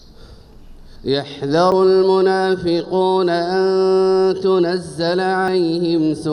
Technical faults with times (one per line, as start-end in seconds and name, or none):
0.96 dropped buffer (overrun)
1.72 dropped buffer (overrun)
5.48 dropped buffer (overrun)